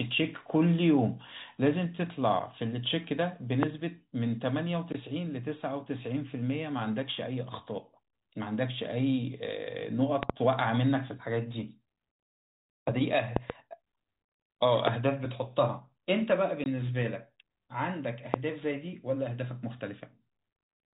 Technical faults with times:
3.63-3.65 loud pop
10.23-10.32 loud pop
13.36-13.52 loud pop
14.87-14.90 loud pop
16.64 packet loss filled with silence
18.34-18.36 loud pop

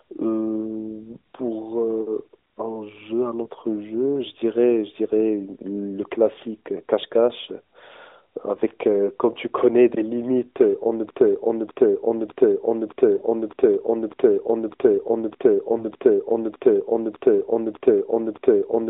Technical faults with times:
3.44-3.48 lost AMR speech frames
11.10-18.89 broken-record loop
13.18-13.23 lost AMR speech frames
15.78-15.85 lost AMR speech frames

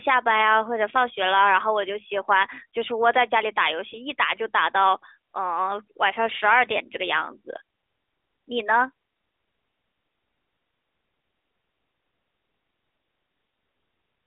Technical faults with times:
3.90-3.98 lost AMR speech frames

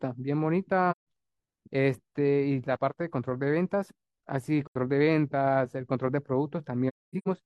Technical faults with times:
0.91-1.06 AAC frame loss with muting
4.67-4.75 AAC frame loss with muting
6.88-7.28 AAC frame loss with muting

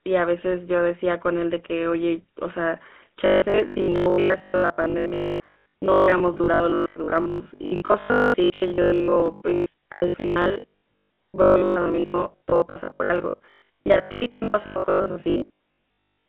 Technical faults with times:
0.00-16.29 GSM full-rate codec
3.26-16.28 robotic sound from repeated short buffers

